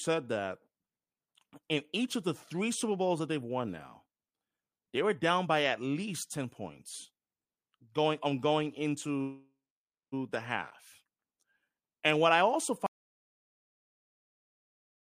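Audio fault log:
12.86–15.10 s, audio dropout to silence: the input feeding the recorder most likely dropped out, through a lost connection or a mute, while recording carried on and stored silence. Right after "what I also" the speech stops mid-phrase and the last 2.24 s are complete silence, with no room tone or noise floor left, and the audio never returns before the end. Whatever followed in that stretch is lost.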